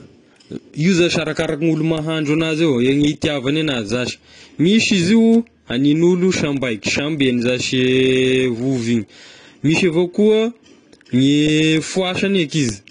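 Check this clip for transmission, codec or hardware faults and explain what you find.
One codec fault runs through the whole speech clip. Low-bitrate audio saved at a high bitrate, throughout: nothing reaches above 10.1 kHz, and the artefacts of heavy compression remain. This likely comes from a roughly 32 kbit/s AAC encode later re-saved as high-bitrate MP3, which cannot restore what was removed.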